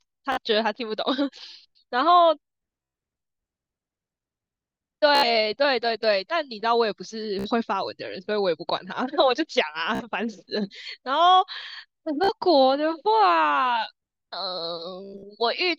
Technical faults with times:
0.32-0.38 Bluetooth stutter
2.82-2.94 Bluetooth stutter
5.15-5.27 Bluetooth stutter
7.39-7.49 Bluetooth stutter
9.95-10.05 Bluetooth stutter
12.24-12.32 Bluetooth stutter
15.04-15.24 Bluetooth stutter

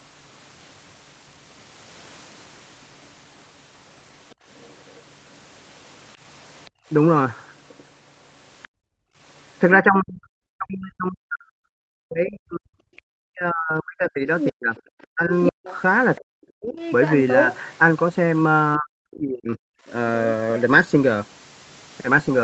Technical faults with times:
4.30-4.98 other side's voice leaking through
6.65-8.68 other side's voice leaking through
6.70-6.88 background gated by the echo canceller
8.68-9.19 background gated by the echo canceller
9.80-16.77 speech suppressed in double talk
12.97-17.59 other side's voice leaking through
18.77-19.59 speech suppressed in double talk
19.87-20.62 other side's voice leaking through

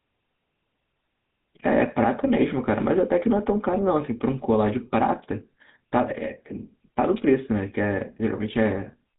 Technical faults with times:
0.00-9.19 GSM full-rate codec

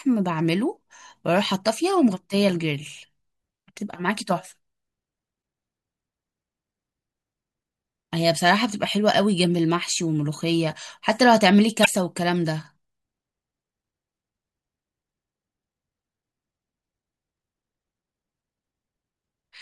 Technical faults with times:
5.39-5.41 damaged data in a compressed stream
11.82-11.87 damaged data in a compressed stream

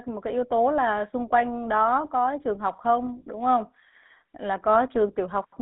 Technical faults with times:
0.00-5.61 GSM full-rate codec

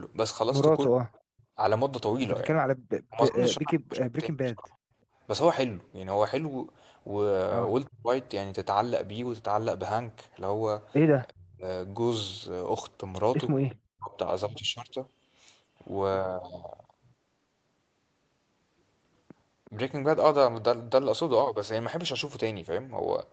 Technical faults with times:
1.35-2.82 background gated by the echo canceller
3.10-4.73 speech suppressed in double talk
7.87-8.11 speech suppressed in double talk
11.30-11.66 speech suppressed in double talk
13.69-13.76 echo leak
13.91-14.17 speech suppressed in double talk
19.65-19.70 echo leak

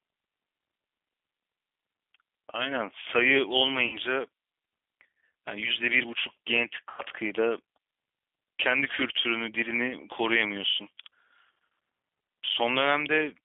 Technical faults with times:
0.00-13.44 G.729 codec
3.87-3.98 VoIP packet loss concealed by the speech codec
6.90-7.02 VoIP packet loss concealed by the speech codec

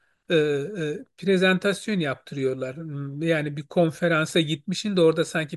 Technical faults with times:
none

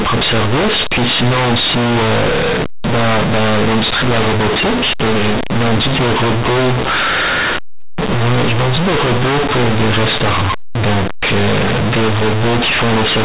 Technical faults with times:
0.00-13.25 companded audio read as linear

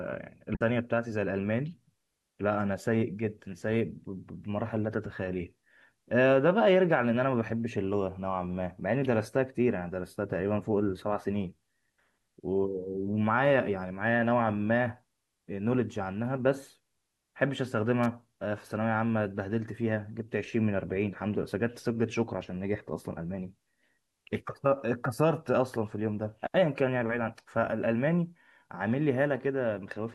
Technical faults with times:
0.52-0.61 damaged data in a compressed stream
18.03-18.06 electrical switching spike

